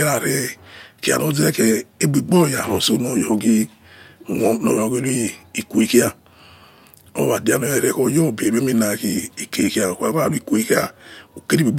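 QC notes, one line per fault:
No faults heard in the speech. Nothing here calls for a timed entry.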